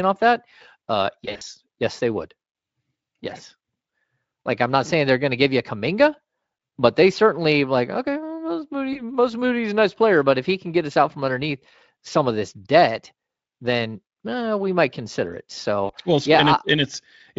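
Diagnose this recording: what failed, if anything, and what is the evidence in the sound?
Speech briefly smears into a fading buzzy tone or coloured noise at 1.25 to 1.43 s, 8.93 to 9.01 s and 15.85 to 15.92 s. This is VoIP packet loss concealed by the speech codec: packets were lost in the network, and the Speex decoder extrapolated its last pitch and filter with decaying gain.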